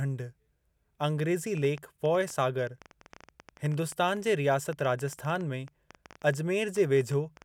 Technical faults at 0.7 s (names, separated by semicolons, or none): none